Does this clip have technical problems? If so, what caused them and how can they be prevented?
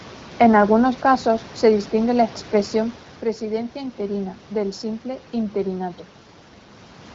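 No, there are no technical faults.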